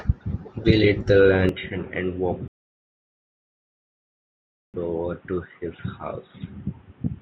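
At 1.49 s the speech suddenly goes dull and boxy. Nothing's left above 3.8 kHz, the level drops about 10 dB, and a new noise floor appears roughly 35 dB down, with no gap at the change. That points to the input likely being switched to a poorer device, one with a narrower band and its own tone and noise.

Then from 2.48 s to 4.74 s there's a rebuffering stall. The player ran dry, went silent, and picked up exactly where it stopped once more data came in. Nothing is missing, but about 2.26 s of dead air gets added.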